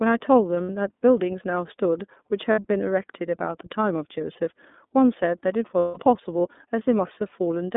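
Throughout, the speech carries the iLBC codec's narrowband sound. Energy sits between about 200 Hz and 3.6 kHz, with a bare spectrogram above that. The rough, slightly synthetic texture fits iLBC's 13.33 kbps mode with 30 ms frames, each coded independently.

Lost iLBC frames cause three gaps: 0.63 to 0.70 s, 2.52 to 2.61 s, and 5.79 to 6.00 s. The decoder repeats the last pitch cycle mixed with noise, so each gap sounds like a held, buzzy vowel. On a spectrogram this shows as flat, smeared harmonic bands, and in the waveform as a regular repeating cycle.

The first two gaps last about 60 ms, consistent with two frames. The third lasts 180 ms, pointing to six frames, and audibly fades in both sound and waveform envelope. The speech recovers almost immediately after each gap.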